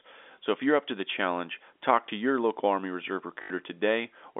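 Packet loss with last packet repeated, 3.42 to 3.5 s: 80 ms went missing and the last packet looped, producing a robotic stutter buzzing near 50 Hz, which fits 20 ms packets.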